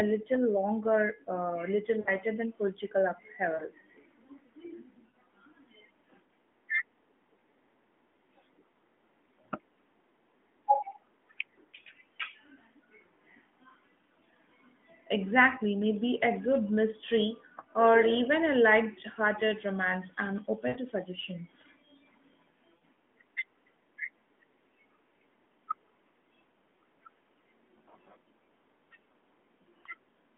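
Lost AMR speech frames occur at 2.00–2.14, 3.54–3.63, 5.10–5.16, 20.68–20.80 and 22.76–22.83 s. Each is a 40 to 80 ms smeared, fading dip, where the narrowband decoder stretched its last good pitch and vocal tract settings at falling gain before the voice returned.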